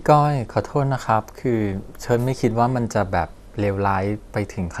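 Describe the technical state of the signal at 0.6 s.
MP2 compression at 0.6 s, present throughout the clip: likely low-rate Layer II coding cuts everything above 14.4 kHz and coarsely quantises the remaining bands, leaving dull, gurgling speech.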